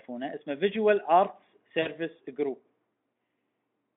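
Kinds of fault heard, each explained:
VoIP packet loss concealed by the speech codec: at 1.82–1.88 s, 40 ms of lost packets, fitting two 20 ms frames, become stretched, fading speech extrapolated by the decoder.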